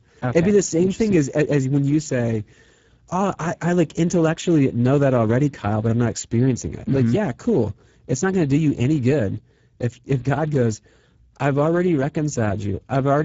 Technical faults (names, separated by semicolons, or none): Speex codec